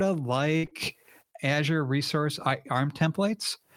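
At 0.57 s a burst of packet loss begins and runs to 0.65 s. About 60 ms of speech never arrived in time. The receiver covered the hole by carrying the last sound forward for 58 ms and letting it fade. This is heard as a brief held buzz or hiss dying away. When the speech returns, the stretch that was lost is simply gone.

Straight after, two short concealed packet losses follow back to back, from 0.65 to 0.69 s and from 0.69 to 0.73 s. Each lost about 20 ms. The receiver patched each one by extending the preceding sound, either from its pitch or as shaped noise, then blending back into the real signal. Together they prolong the disturbance. The result is a small smear and wobble trailing the first gap before clean speech resumes.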